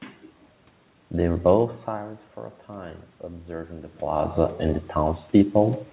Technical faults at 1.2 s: none

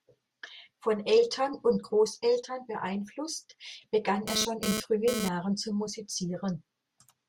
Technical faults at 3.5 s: none

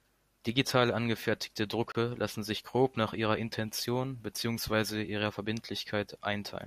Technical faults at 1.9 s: gap between stream segments

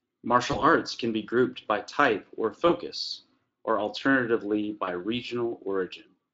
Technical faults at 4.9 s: VoIP packet loss concealed by the speech codec

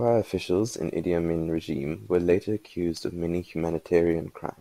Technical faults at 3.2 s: block size mismatch (truncated)

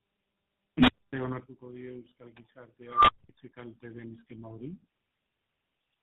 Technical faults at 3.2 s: tandem speech coding; unstable filter

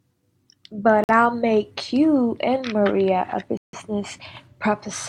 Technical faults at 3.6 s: Bluetooth stall

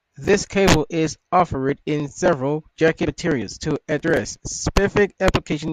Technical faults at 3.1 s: compressed frames skipped

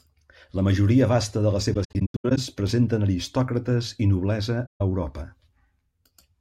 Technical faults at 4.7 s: AAC frame loss with muting

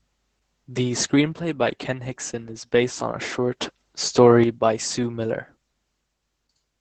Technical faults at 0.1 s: Opus voice compression

